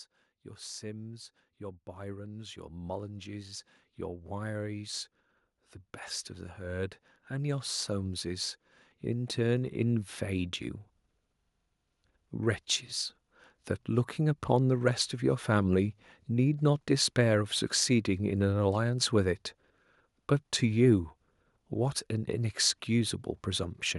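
From 0.78 to 5.04 s, automatic gain rising lifts the level by about 9 dB. The gain control judged the input too quiet and raised its gain slowly. Speech and background swell together. It happens again from 6.57 to 10.58 s, by about 7 dB.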